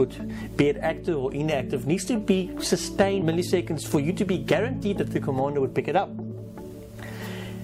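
The audio skips ahead at about 3.21 s. Roughly a second of sound is missing. The two sides of the jump are joined almost directly, with no silence or fill in between. This happens when a stretch of audio is dropped, in transit or by an overflowing jitter buffer, while later audio is already queued. Playback then lands on the later material. The listener's delay drops by about a second at that point. A jitter buffer speed-up follows from 3.37 s to 6.65 s. Playback runs at about 107 percent of normal speed, but the pitch stays the same. The sound feels slightly hurried across those three seconds. The buffer was holding more audio than its target. To catch up, the receiver cut out many short pieces, each one or a few pitch periods long. Together they remove roughly a fifth of a second.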